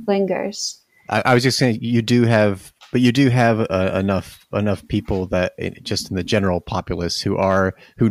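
Hard clipping breaks up the speech from 1.15 to 1.66 s, 2.13 to 2.42 s and 7.41 to 7.61 s: peaks overdrive a stage by about 4, 3 and 2 dB, get sliced flat, and the added high harmonics turn loud syllables into harsh crackle.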